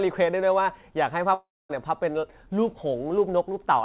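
In this narrowband speech recording, with nothing above 4 kHz as on a telephone-style call, the sound breaks up at 1.34 s: the last bit of audio is smeared into a buzzy, fading tail that decays into near-silence for about a quarter of a second, and speech resumes at 1.71 s with roughly 0.36 s of it gone. This is likely a long network dropout, where packets stopped arriving and the receiver's concealment stretched the final sound before giving up.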